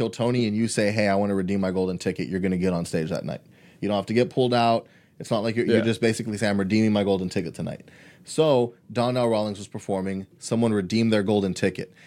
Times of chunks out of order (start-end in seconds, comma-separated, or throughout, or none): none